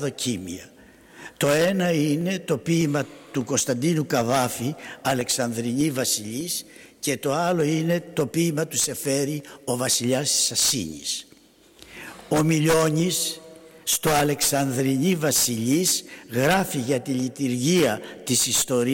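From 0.42 s to 18.40 s a click repeats every 0.6 s, around thirty in all, wherever there is signal. These are clock drift buffer slips, likely from two devices whose clocks disagree by something like 700 ppm, so the buffer between them drifts until about 15 samples are dropped or repeated. On a waveform each slip shows as a step discontinuity, and on a spectrogram as a full-height vertical line at a regular spacing.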